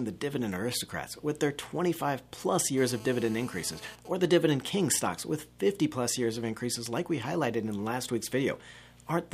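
A nearby 2G phone in a call rectified into the audio circuit, producing GSM phone buzz from 2.77 to 3.96 s, a hard raspy 217 Hz tone with harmonics about 20 dB below the signal. With a phone's user silent in a call, its sparse transmissions became GSM signalling bursts from 3.99 to 5.07 s, a fainter pattern of even ticks with a longer 217 Hz buzz twice a second roughly 30 dB down.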